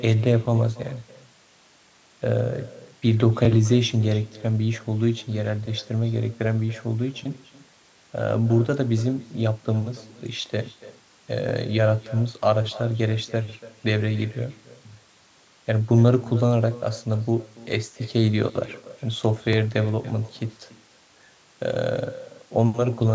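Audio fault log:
Throughout, echo with no canceller: the far end's loudspeaker feeds back into its mic, so each phrase returns about 20 dB down, roughly a third of a second late, and thin.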